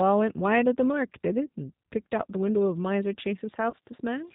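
The whole speech clip carries the sound of the G.729 codec. Nothing above 4 kHz survives, which fits an 8 kbit/s speech coder. The voice is rebuilt from a vocal tract filter and a few pulses per frame. It sounds plainly rough and synthetic.

At 3.70 to 3.74 s, VoIP packet loss is concealed by the speech codec. About 30 ms of audio went missing, which fits one lost packet. The decoder stretches its last pitch and filter. The gap becomes a brief buzzy tone or coloured noise that fades, and the voice stays weak just after.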